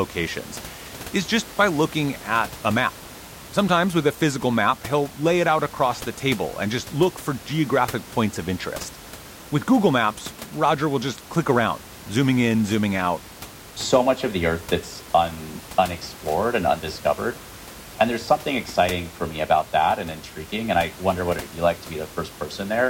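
Nothing goes wrong anywhere in this speech recording, and the only thing under it is the ordinary background noise of the room, sitting about 18 dB below the talking.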